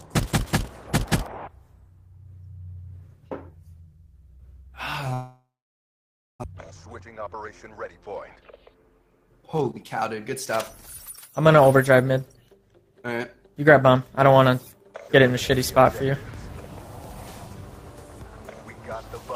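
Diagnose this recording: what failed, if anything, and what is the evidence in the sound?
Long network dropout, 5.13 to 6.46 s. No audio arrives and the gap is filled for about 1.3 s: the last sound is stretched into a fading buzz or hiss, then about 0.9 s of silence or low steady noise. When the audio returns, about one second of material is gone. This is likely a network stage fault, where no packets arrived and the receiver concealed the gap, leaving roughly 300 ms of extra delay.

Jitter buffer speed-up, 6.53 to 8.60 s. Right after the recovery the sound runs at 112% speed with unchanged pitch and comes across as hurried. The buffer held more audio than its target once delivery resumed, so the receiver repeatedly cut out short pieces one or a few pitch periods long. About 300 ms was removed in total, bringing the delay back down. This is a buffer-stage fault in playout.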